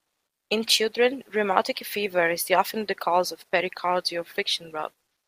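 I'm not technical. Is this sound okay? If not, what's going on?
No. At the very start, the calling system likely stopped sending sound during the pause before speech began and filled the gap itself. That is comfort noise in place of the background: from 0 to 0.49 s you hear a flat, quieter, artificial hiss instead of the real room.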